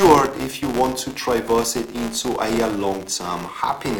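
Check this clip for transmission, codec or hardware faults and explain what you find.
There is one fault, and it runs through the whole clip. A filter restarted on every block is processing the audio. The filter drops its memory at each block boundary and starts again from silence. Each restart leaves a small transient at the start of the block. These transients repeat at 200 Hz, which fits blocks about 5 ms long. The result is a steady 200 Hz buzz under the sound. It grows louder and quieter along with the signal.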